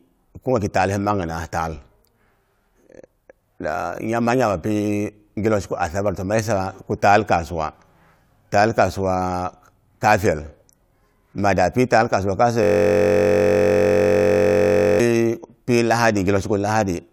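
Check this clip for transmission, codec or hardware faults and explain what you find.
One hardware fault is present in this speech clip. A system hang loop runs from 12.63 to 15.0 s, just after "taal kasuwa". The driver froze while the hardware kept replaying one 21.33 ms buffer, consistent with 1024 samples, over a hundred times, producing a steady 46.9 Hz buzz.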